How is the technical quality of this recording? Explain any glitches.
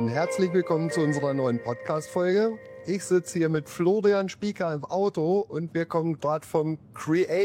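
Nothing here sounds off, so there aren't any glitches to explain.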